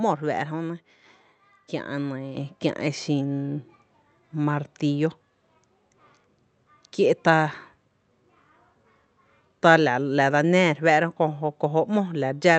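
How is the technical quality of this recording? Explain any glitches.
The recording has one clear glitch, a sudden level jump. It passed through an Opus call path whose top end stops near 8 kHz.

At 2.37 s, between "kiä’ e" and "e xin", the microphone volume stepped up. The call software judged the input too quiet. It raised the device gain in a single step of about 6 dB. Speech and background both get louder at once, mid-phrase.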